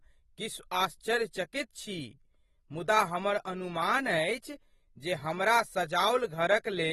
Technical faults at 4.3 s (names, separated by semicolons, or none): AAC compression